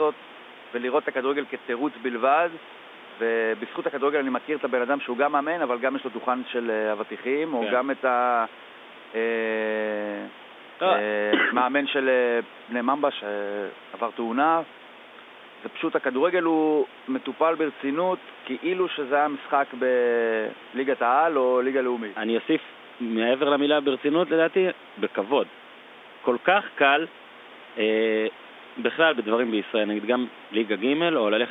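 No faults found: the room noise sits about 19 dB under the speech, and the G.711 telephone line passes roughly 250 Hz to 3.6 kHz, with nothing above 3.7 kHz.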